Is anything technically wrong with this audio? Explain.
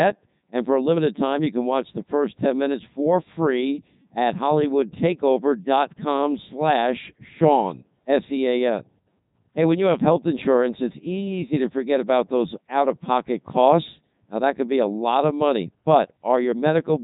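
Yes. Throughout the clip, the speech carries Codec 2 vocoder damage, and it is heavy. Instead of keeping the waveform, this codec sends only pitch, voicing, energy and a coarse spectral envelope, and the decoder rebuilds the voice from sine waves. The result sounds robotic and buzzy, with nothing above 3.8 kHz. The character fits Codec 2's highest mode, 3.2 kbit/s.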